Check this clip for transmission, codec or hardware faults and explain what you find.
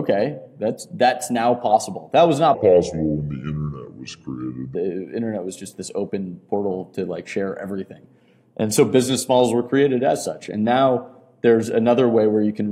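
One fault turns up: a section at the wrong speed from 2.54 to 4.75 s. That stretch plays at about 0.71 times normal speed, likely from being clocked at the wrong rate, so the sound drags and drops roughly five semitones, then snaps back afterward.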